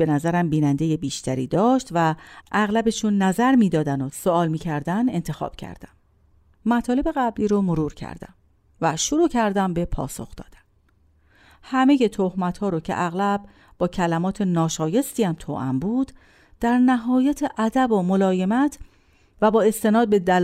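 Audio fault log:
No faults are heard in this speech recording.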